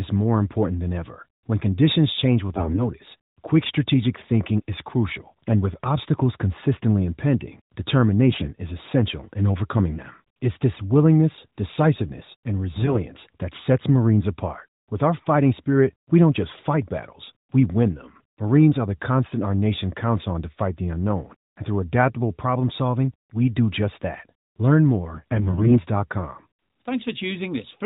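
AMR bit errors break into the speech at 2.56–2.87 s, 8.28–8.52 s, 12.74–13.04 s, 16.58–16.68 s and 25.14–25.78 s. The weak link corrupted the lightly protected bits of each frame, so the excitation pulses land wrongly and the fine pitch, gain and spectral values drift. Level and pitch roughly hold, but the voice turns hoarse and gargly, longest in the burst near 25 s. On a spectrogram, harmonics smear into grainy hash beneath the 4 kHz ceiling of the AMR narrowband mobile codec. The waveform keeps its envelope but looks jagged.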